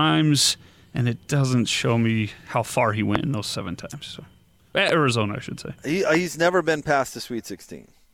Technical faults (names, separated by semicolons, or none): loud pop